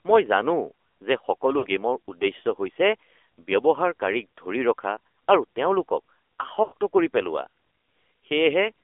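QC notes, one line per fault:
throughout, AMR narrowband mobile codec: speech coded with a low-rate vocal tract model at 8 kHz sampling, with the line passing only about 300 Hz to 3.5 kHz. The plainly audible buzzy, synthetic quality fits a rate of about 7.4 kbps.
1.58–1.67 s and 6.64–6.73 s, lost AMR speech frames: frames failed their checksum, so the decoder repeated the last good pitch and vocal tract settings at falling gain. The 60 ms and 80 ms gaps fit three and four lost 20 ms frames, and are heard as brief smeared, fading dips.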